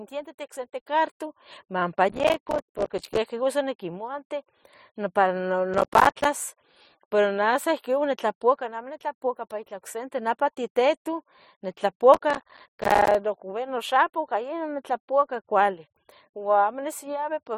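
The processor repeatedly misses deadlines for buffers of about 5 ms, dropping dozens of them to silence: processor overload crackle at 2.09–3.17 s, 5.74–6.25 s and 12.14–13.15 s, heard as gritty, tearing bursts of hard-edged gaps riding on the speech.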